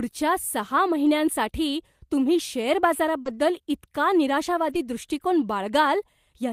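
At 1.05 s one packet was lost and rebuilt from error correction: the decoder played the low-bitrate redundant copy carried in the following packet, so the 20 ms has no gap but sounds rougher and noisier. From 3.21 to 3.27 s a short concealed packet loss fills a 40 ms hole by extending the preceding sound and then blending back, heard as a brief smear. It runs straight into a further rebuilt stretch from 3.25 to 3.35 s, about 60 ms, consistent with three packets recovered through error correction, and again grainy. At 4.69 to 4.75 s another 40 ms, pointing to two lost packets, is rebuilt the same way with the same coarse, noisy texture.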